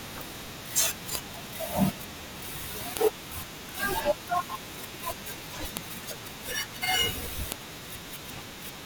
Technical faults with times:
1.15 file header played as audio
2.97 file header played as audio
5.77 file header played as audio
7.52 file header played as audio

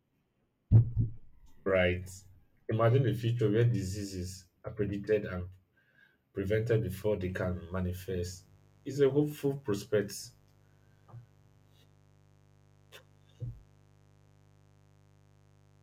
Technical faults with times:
7.32-15.82 mains buzz

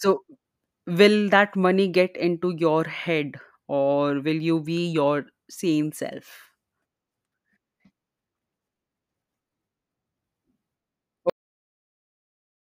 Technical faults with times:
11.30-12.61 cut-off end

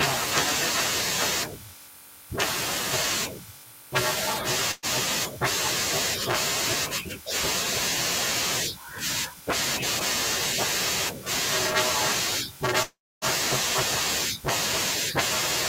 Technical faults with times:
4.71-4.86 burst of packet loss
12.83-13.25 long network dropout

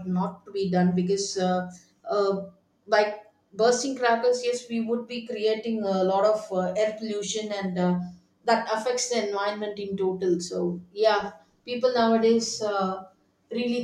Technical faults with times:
none

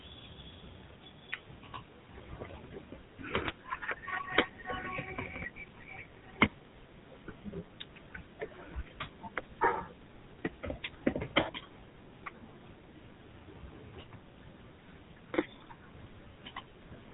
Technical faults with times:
0.00-17.14 GSM full-rate codec

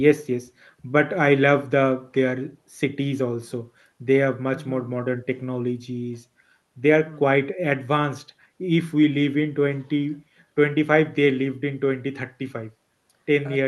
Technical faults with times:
none

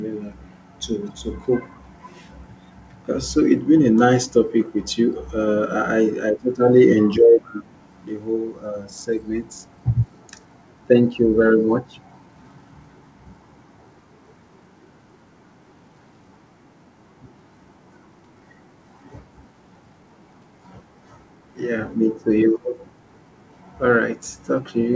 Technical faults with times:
7.43-7.63 echo leak

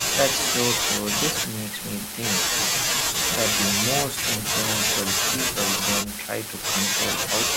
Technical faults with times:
none

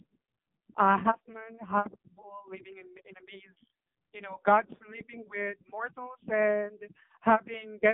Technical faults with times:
0.00-7.93 AMR narrowband mobile codec

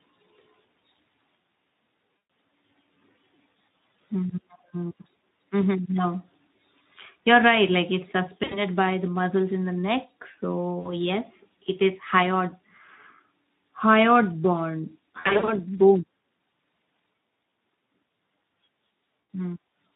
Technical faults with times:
0.00-19.95 Speex codec
2.17-2.29 VoIP packet loss concealed by the speech codec
8.43-8.62 VoIP packet loss concealed by the speech codec
10.79-10.93 VoIP packet loss concealed by the speech codec
15.19-15.55 VoIP packet loss concealed by the speech codec
19.21-19.29 VoIP packet loss concealed by the speech codec

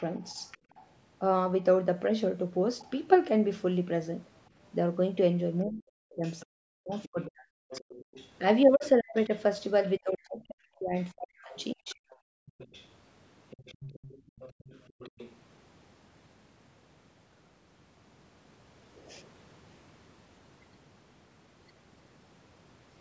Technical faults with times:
0.00-0.84 other side's voice leaking through
0.58-0.75 background gated by the echo canceller
2.79-2.89 other side's voice leaking through
5.69-11.99 speech suppressed in double talk
6.24-9.90 other side's voice leaking through
10.99-15.37 other side's voice leaking through
12.27-12.53 background gated by the echo canceller
14.22-14.33 background gated by the echo canceller

